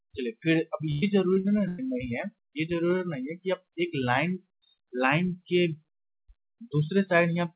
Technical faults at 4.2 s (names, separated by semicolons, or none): none